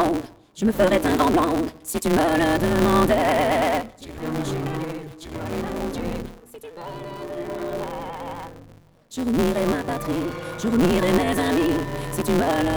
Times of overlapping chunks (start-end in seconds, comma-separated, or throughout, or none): none